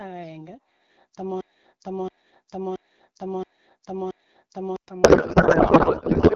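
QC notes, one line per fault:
1.41–4.76 s, broken-record loop: a 0.67 s chunk of speech repeats exactly, back to back, five times, and whatever should have played there is gone. The likely cause is the player or stream stalling and re-sending the last fragment it had buffered.
5.03–6.35 s, codec payload misread: right through to the end, the speech turns into garbled noise and warble that barely tracks the talker. It sounds like octet-aligned AMR-WB frames being read as bandwidth-efficient, so the decoder pulls every field from the wrong bit positions.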